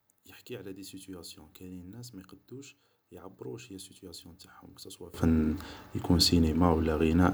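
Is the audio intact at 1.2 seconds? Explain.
No. At 1.2 seconds the speech is faint, with nearly all of it cancelled and the level down by about 22 dB, part of a stretch running from 0.0 to 5.14 s. The likely cause is one channel inverted: one side of the stereo pair has reversed polarity, so when the two are summed to mono, the material they share cancels and only their faint difference remains.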